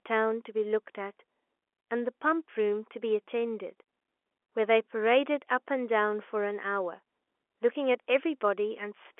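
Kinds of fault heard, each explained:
Nothing stood out on listening to this speech clip, which comes across with the narrow, band-limited sound of an ordinary telephone line.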